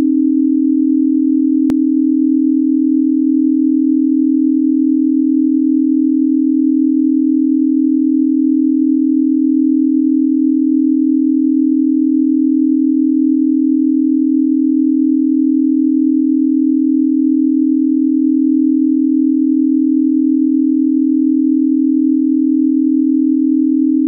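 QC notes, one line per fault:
1.70 s, dropped buffer (overrun): the sound jumps ahead with no silence, likely from a few milliseconds of samples being overwritten before they were read. The waveform shows a sudden step at the join; the spectrogram shows a thin broadband vertical line.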